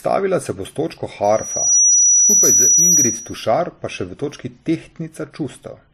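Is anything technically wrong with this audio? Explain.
Yes, two things. Throughout, the speech has layered swirly, smeary artefacts and nothing above 14.9 kHz, likely from transcoding between lossy codecs: a low-rate MP3 re-encoded to WMA, each adding damage. Then, from 1.24 to 3.42 s, between "se bo s točko" and "pa še", there's loudspeaker feedback squeal: the mic loop rings at 5.8 kHz, swelling over about half a second to roughly 10 dB above the speech.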